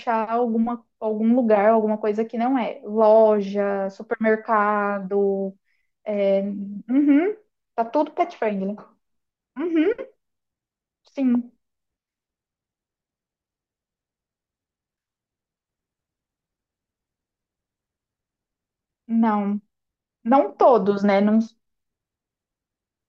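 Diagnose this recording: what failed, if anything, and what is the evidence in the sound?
Nothing in this speech recording points to a failure at any stage of the chain. There is no audible evidence of a fault to report.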